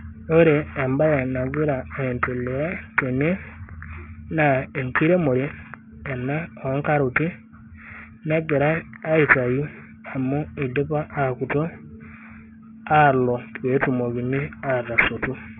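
Gritty, metallic sibilance runs through the whole of this speech recording, with hissy consonants smeared into harsh, unrelated tones and the spectrum packed hard against a ceiling near 3 kHz. The fault is aliasing. The sound points to a resample down to about 6 kHz with no anti-aliasing filter, so content above the 3 kHz fold point mirrored back into the band. That folded energy sits only about 10 dB under the speech.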